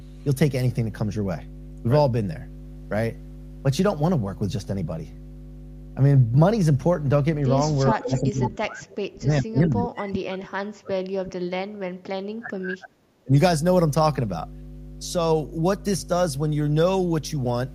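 A mains hum runs under the whole recording. It is a steady 50 Hz tone with low harmonics, roughly 10 dB below the speech. A ground loop or nearby transformer has leaked the power line into the signal path.

From 7.93 to 11.95 s the speech is suppressed in double talk. The level dips hard, by around 35 dB at its deepest. Both ends were likely talking at once, so the echo canceller ducked everything.

Inside that stretch, from 8.17 to 8.5 s, there is an echo leak. A delayed copy of the speech arrives 405 ms late, about 10 dB below it. The far end's echo canceller likely failed to remove its loudspeaker's pickup.

From 12.25 to 13.36 s the double-talk suppression returns for about a second. The speech again drops sharply. The same echo-canceller clamp is likely at work while both sides speak.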